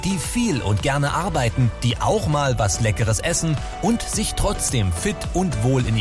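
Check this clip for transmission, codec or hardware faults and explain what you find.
Nothing audible points to a transmission, codec or hardware fault anywhere in the clip.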